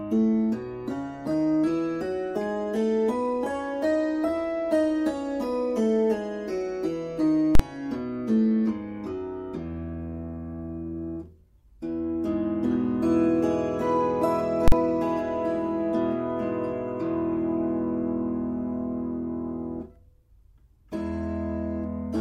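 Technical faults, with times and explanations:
7.55–7.60 s and 14.68–14.72 s, invalid numbers at full scale: a sharp bang as the output pins at one extreme value for about 43 ms, which fits a 2048-sample block of invalid values.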